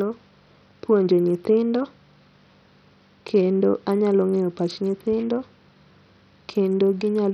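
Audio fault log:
Throughout, Bluetooth SBC compression: the speech has lost its top end, with treble flickering in and out and a gritty, aliased haze riding on everything. That's likely SBC on a starved bit pool, which fits a rate near 64 kbps, so the upper sub-bands get almost nothing.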